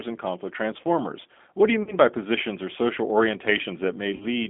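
From start to finish the speech carries G.729 codec damage. The line is held to roughly 250 Hz to 3.5 kHz, and the voice is rebuilt from a filter, pitch predictor and sparse pulses, giving a plainly rough, synthetic edge. This points to the 8 kbit/s G.729A variant rather than simple band-limiting, which would stay smooth.

At 1.83 to 1.98 s, between "do you" and "by positions or social", comes VoIP packet loss concealed by the speech codec. The decoder stretches its last pitch and filter into a fading buzzy tone or coloured noise, consistent with about 40 ms of lost frames. Unlike a dropout to silence, it sounds smeared and keeps the voice weakened briefly after recovery. The same happens at 4.16 to 4.26 s.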